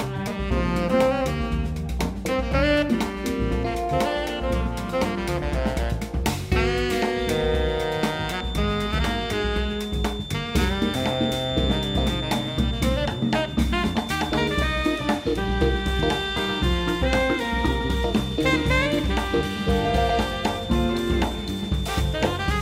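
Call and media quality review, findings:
Feedback whistle, 7.10 s to end of clip. Speaker-to-mic loop likely sitting at the edge of instability, gain just short of runaway. Result: thin, steady 3.6 kHz tone under the sound, roughly 15 dB down, swelling and fading slowly in level.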